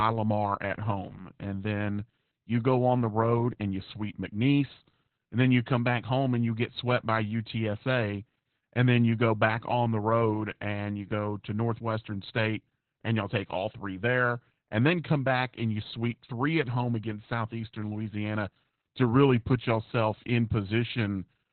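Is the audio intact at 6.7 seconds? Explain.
No, not really. The whole clip, 6.7 s included, carries Opus voice compression in its narrowband SILK mode, with nothing above 4.2 kHz. The speech sounds muffled, hoarse and a bit robotic, which fits a bitrate down around 8 kbps.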